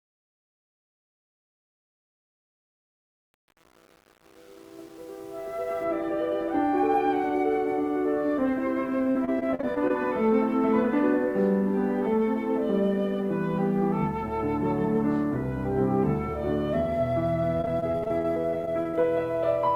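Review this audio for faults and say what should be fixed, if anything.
Choppy, robotic stretches break up the audio from 9.11 to 9.91 s and again from 17.57 to 19.05 s. This is repeated packet loss: short holes, none longer than 40 ms, follow one another closely. Each is patched by stretching the preceding sound, covering about 22% of the first span and 28% of the second. Roughly 0.2 s and 0.4 s of material are lost. A larger jitter buffer and a steadier network path should prevent this.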